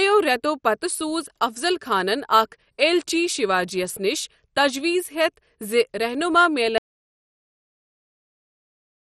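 Throughout the speech, the encoder appears to have been starved of bits, most likely by MP2 compression at a low rate, with damage heavy enough to fit something around 56 kbps. With so little to share among its 32 sub-bands, the coder has shut off the top ones entirely, so nothing remains above 13.2 kHz, and the bands it kept are coarsely quantised. The result is a dull, gurgling, granular quality, with upper detail flickering in and out.

At 6.78 s the input feed is lost, likely through a disconnected device or a failed link, while the recorder keeps writing silence. This audio dropout to silence cuts the speech off mid-flow and leaves dead silence, with no room tone at all, running to the end of the clip. Everything after that point is gone.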